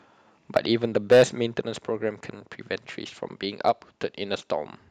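Microphone overload at 0.96 to 1.23 s and again at 3.68 to 3.70 s. The speech peaks are flattened at the converter's limit, about 8 dB over in the first burst and about 2 dB in the second. The result is a harsh crackle, likely from input gain set too high for the converter.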